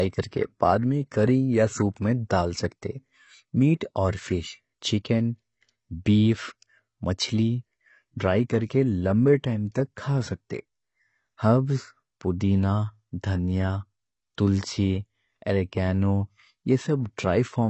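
Throughout, the speech is dull and warbly, cut off above 8.1 kHz. A spectrogram shows a hard ceiling, consistent with AAC compression, likely at around 24 kbps.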